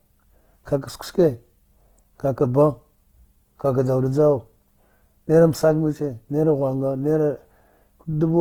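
Opus compression runs throughout the speech, likely in its music mode at a low rate near 16 kbps. With too few bits, band energies are kept but their detail is filled by folding or noise, so the sound turns grainy and rough while content still reaches about 20.2 kHz.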